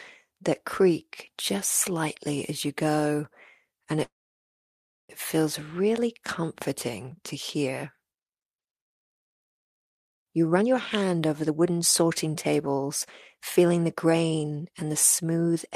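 At 4.03 s the speech breaks off in a call audio freeze. The sound holds for a moment, then drops to near silence for about 0.98 s. Speech resumes at 5.12 s with "feels really comforting to". The gap lasts about 1.06 s. Nothing is lost. The speech simply picks up where it stopped, about a second later. The likely cause is packets held up in transit, leaving the jitter buffer empty until they arrived.

Later come two jitter buffer speed-ups. From 10.49 to 12.07 s the speech runs at 124% speed. About 0.4 s has been trimmed out. From 13.37 to 15.70 s it runs at 112%, with roughly 0.3 s removed. The pitch stays the same throughout, but the talker sounds rushed. The receiver cut many tiny pitch-period slices in a row to shrink a swollen buffer and bring the delay back down.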